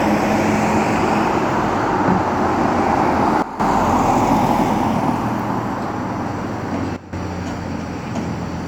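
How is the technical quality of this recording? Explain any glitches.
The technical quality is compromised in two ways: a persistent coding character across the whole recording and two brief level drops.

Throughout, the sound carries the artefacts of an earlier lossy encoding, with nothing above 20.1 kHz. This is likely low-bitrate audio saved at a high bitrate: a coarse encode, around 48 kbit/s, later re-encoded as 320 kbit/s MP3, which cannot restore the discarded detail.

At 3.42–3.60 s and again at 6.96–7.13 s, the level abruptly falls by about 13 dB, background included, then snaps back. Each is likely a sudden gain jump, a digital gain change applied instantly without a ramp, so the whole signal steps down together.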